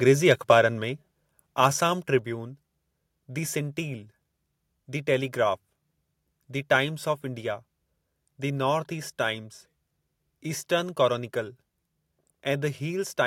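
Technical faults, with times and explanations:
0.31–0.55 s, microphone overload: The input level likely ran about 2 dB beyond what the converter could take, so a small fraction of the peaks are sliced flat, giving the loudest syllables a harsh, crackly edge.
1.02 s, microphone volume stepped down: The call software likely cut the microphone's input gain in one move, and voice and background together drop abruptly by about 3 dB, half a second after the distorted peak.
1.64–1.66 s, microphone overload: Again likely about 2 dB too hot, but here roughly 2 percent of samples are flattened in this brief burst, giving it the same harsh, crackly edge.
2.19 s, microphone volume stepped down: A second one-step gain cut, likely by the call software, follows the renewed clipping, and the whole sound sinks suddenly by about 2 dB.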